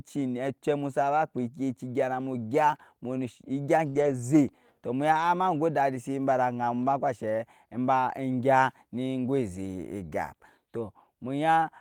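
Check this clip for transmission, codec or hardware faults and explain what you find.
There are two transmission faults in this speech, both from lost packets.

From 3.89 to 3.97 s there is a burst of packet loss. The receiver stretched the last sound for about 51 ms, fading it out. Speech then resumes about 40 ms further on. That stretch is simply missing.

Lost packets rebuilt from error correction follow at 3.95 to 4.13 s and 5.13 to 5.23 s. Each lost packet's low-bitrate copy arrived in the next packet. The decoder played those copies, so nothing drops out. About 100 ms and 60 ms sound rougher and noisier.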